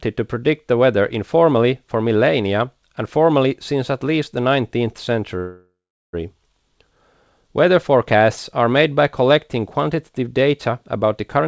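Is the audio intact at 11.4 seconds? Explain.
No. From 11.39 s to the end at 11.47 s the speech is hit by a jitter buffer speed-up. The receiver's buffer held more audio than its target, so it cut out short pitch-period-sized pieces in quick succession, about 40 ms in all. The speech runs at roughly 143% speed and sounds hurried, with its pitch unchanged. On a spectrogram the harmonic lines stay at the same frequencies but the final stretch is compressed in time. In the waveform, pitch cycles are spliced together, with no content above 8 kHz from the G.722 call path.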